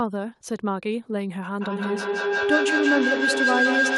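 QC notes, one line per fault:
1.61 s to end: feedback howl. A tone near 1.5 kHz builds instead of decaying and peaks at about 2 dB above the speech level. The microphone is picking up a loudspeaker carrying the same call, and each trip around that loop adds gain, so the repeats reinforce rather than fade and collapse onto the frequency the loop favours. The tone pulses roughly every 150 ms, the loop's round-trip delay, and continues to the end of the clip.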